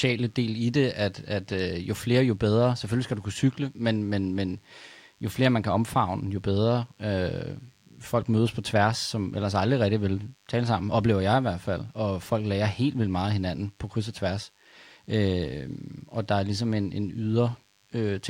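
A thin, steady 100 Hz buzz rich in harmonics runs faintly beneath this speech throughout, well below the voice. That's DECT cordless phone buzz: a nearby handset or base bursting every 10 ms, rectified by the audio circuitry.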